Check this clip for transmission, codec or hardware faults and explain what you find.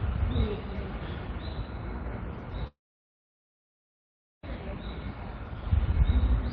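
One fault stands out in these sounds carried over an Opus call path. Long network dropout, 2.67 to 4.45 s: packets likely stopped arriving. A brief fading buzz or hiss gives way to near silence, and the sound resumes with that stretch missing.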